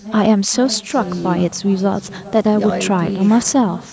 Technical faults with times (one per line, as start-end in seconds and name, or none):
0.00-3.93 echo with no canceller